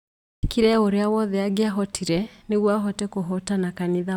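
At 0.32 s, "o ũrĩa wothe angĩahotire" begins abruptly, its first 0.11 s missing: a clipped start after a pause, as the sleeping output device wakes late.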